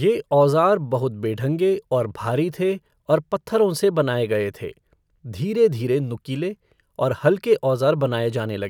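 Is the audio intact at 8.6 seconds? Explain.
Yes, at 8.6 seconds the speech plays through with no audible fault.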